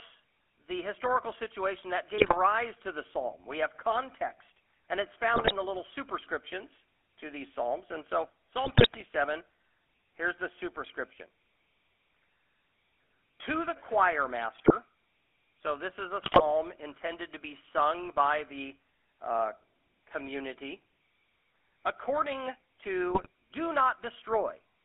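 The speech runs through the GSM full-rate codec from start to finish. A pulse-driven vocal-tract model with a thinned excitation squeezes it into a 300 Hz to 3.4 kHz line band, a rate that fits 13 kbps. The result is a plainly buzzy, gravelly roughness over all of it.

GSM bit errors strike at 2.18–2.38, 5.34–5.53, 8.64–9.03, 14.58–14.72, 16.22–16.41 and 23.13–23.27 s. Corrupted filter, pitch and gain values reach the decoder and distort frames, so each burst breaks into squawks, pops and gargling, longest around 8.6 s.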